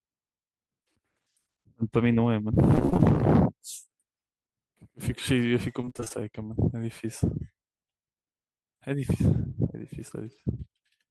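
From 2.75 to 3.04 s and again from 5.81 to 6.26 s, repeated packet loss (robotic sound) chops the speech into choppy fragments with pieces missing. Short gaps of up to 21 ms are papered over by repeating prior sound, which shows as smeared, repeated spectrogram slices and a stuttering waveform.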